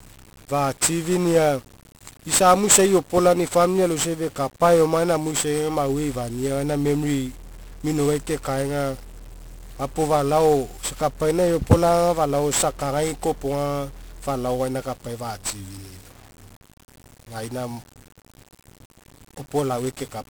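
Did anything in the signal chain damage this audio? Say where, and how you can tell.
Yes, at the codec: 1-bit DFPWM compression runs throughout the speech, one bit per sample nudging an adaptive level, leaving heavy broadband fuzz, crackle and treble-burying hiss.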